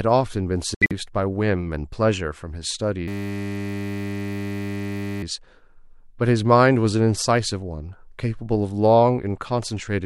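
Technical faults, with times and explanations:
0.75 to 0.92 s, corrupt frame muted: The sound drops abruptly into dead silence for about 175 ms, then picks up again with the timing intact. This matches a run of about seven 25 ms compressed frames whose bits were damaged. The decoder rejected them, and the player filled the gap with silence. Because each frame is replaced rather than skipped, the hole is a whole number of frame lengths and nothing after it shifts.
3.08 to 5.23 s, system hang loop: For just over two seconds the audio turns into a steady, hard buzz pitched at 100 Hz. The same 10 ms scrap of sound repeats exactly, more than two hundred times. The computer or driver stalled while the sound hardware kept replaying its ring buffer, which fits a 10 ms buffer. A loop this short fuses into a tone rather than a stutter, and little or no audio seems to be lost once playback resumes.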